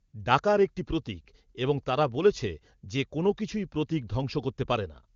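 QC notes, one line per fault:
0.07–0.13 s, AMR comfort noise: for 60 ms the phone judged the audio silent and sent no speech frames, so the receiver filled the gap with smooth synthetic noise. On a spectrogram it is a flat, featureless band with abrupt edges; the waveform shows a steady low-level patch.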